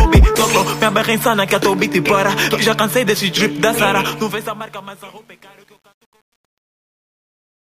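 The audio fades out from roughly 4 s to the end at 7.63 s, and from 3.97 s that fade carries truncation distortion, worst from 4.71 s onward. The gain stage drops low bits without dither, which fits a path keeping only 9 bits, so the quiet tail turns gritty. A zoomed waveform shows staircase steps, and a spectrogram shows broadband harmonic smear spreading above the fading sound.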